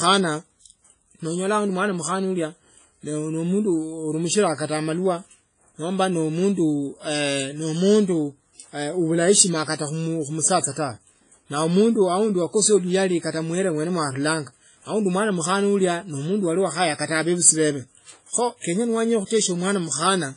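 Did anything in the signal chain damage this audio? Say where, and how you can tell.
Yes. The damage is at the codec stage, throughout the clip. The speech sounds washy and ringing, with nothing above 10.1 kHz. The likely cause is heavy WMA compression at a bitrate near 24 kbps.

Pre-echo, from the same codec, occurs at 19.26 to 19.30 s, after "bebe kho kenya nowenya". Block noise leaks 46 ms ahead of an attack as hiss and smears it.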